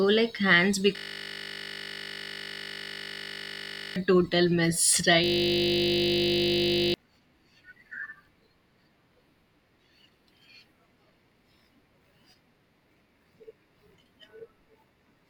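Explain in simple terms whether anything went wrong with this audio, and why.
A system hang loop struck twice, from 0.96 to 3.96 s and again from 5.24 to 6.94 s. Each time, the computer briefly froze while the sound hardware kept replaying the same tiny slice of audio, about 20 ms long, over and over. Repeating that fast, 50 times a second, it turns into a steady buzz instead of speech, and roughly three seconds and then about one and a half seconds of the real speech are lost.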